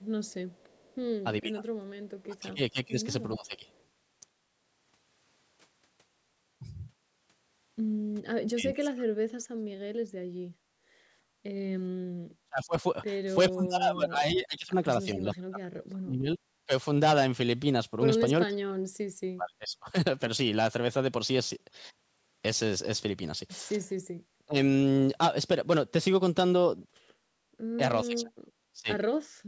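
From 0.01 to 0.96 s a very faint repeat of the speech trails the original by about 0.42 s. It is an echo leak, likely from a loudspeaker on the far end whose echo canceller let some of its microphone pickup back into the call.

At 1.41 to 3.68 s and again at 8.47 to 9.71 s the speech dips in pieces, by roughly 20 dB in the first stretch and far deeper, nearly to silence, in the second. This is speech suppressed in double talk, likely because both sides spoke at once and the canceller turned everything down.

From 10.58 to 11.43 s the room sound behind the speech drops by about 9 dB for well over half a second, then returns. That is background gated by the echo canceller, clamping the microphone while the loudspeaker played.

The same double-talk suppression returns at 12.46 to 16.7 s, where several seconds of speech sink by roughly 35 dB, then at 18.48 to 19.95 s, in a brief tenth-of-a-second notch at 24.46 s, and from 28.05 s to the end, with the deepest cuts nearly silent.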